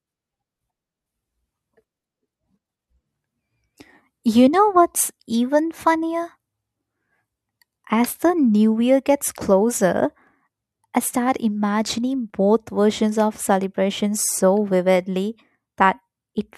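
From 10.27 s to 16.38 s the speech carries periodic USB or driver dropouts: every 1.02 s, about seven times, a few milliseconds of audio are skipped when the driver stalls, giving regular ticks. The waveform shows abrupt splices; the spectrogram shows thin vertical broadband lines.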